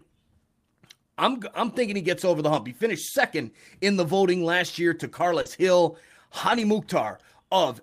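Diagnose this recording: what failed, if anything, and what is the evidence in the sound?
Network stage, with the codec recovering. At 2.57–2.59 s, 5.45–5.47 s and 6.49–6.63 s the speech turns briefly rougher and noisier with no gap. These are lost packets rebuilt from error correction. The next packet carried a low-bitrate copy, which the decoder played. The last event rebuilt about 80 ms.

Network stage again, hidden by the decoder. From 5.41 to 5.47 s there is a short smear or wobble. This is short concealed packet loss. About 40 ms arrived too late, so the receiver extended the preceding sound, then blended back. Its tail overlaps the rebuilt frame at 5.45 s.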